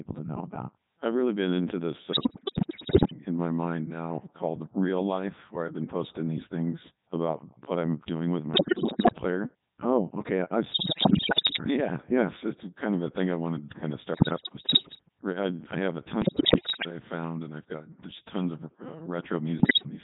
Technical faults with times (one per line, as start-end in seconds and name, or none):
0.00-20.04 Codec 2 vocoder
2.12-3.16 bit errors on digital voice radio
8.54-9.18 bit errors on digital voice radio
10.72-11.64 bit errors on digital voice radio
14.14-15.09 bit errors on digital voice radio
16.22-16.90 bit errors on digital voice radio
19.60-19.86 bit errors on digital voice radio